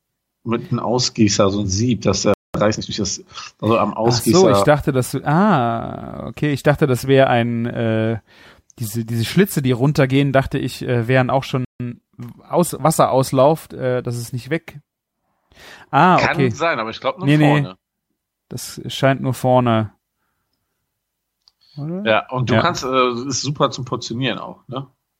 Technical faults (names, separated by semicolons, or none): playback stall; time-compressed catch-up